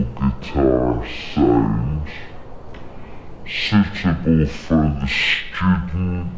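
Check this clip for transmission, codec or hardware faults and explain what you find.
One fault runs through the whole clip: a wrong sample rate. The audio plays at half its intended speed. Pitch falls a full octave, 12 semitones down. The samples were never converted, so they are read out at half the rate they were captured at. That fits material recorded at 32 kHz and played back at 16 kHz. Speed and pitch shift together by the same factor. The result sounds low, slow and dragged out from start to finish.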